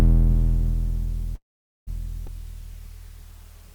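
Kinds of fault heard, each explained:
Call audio freeze: at 1.35 s the music stops, fading to about 0.46 s of silence, then resumes intact at 1.89 s; likely packets held up until the jitter buffer emptied.
Skip ahead: at 2.27 s the music jumps forward almost seamlessly, losing roughly 150 ms, because a stretch was dropped while later audio was already buffered.
Jitter buffer slow-down: from 2.42 to 3.74 s the music drags to 96% speed at unchanged pitch, adding 52 ms as the receiver repeats short periods to rebuild its reserve.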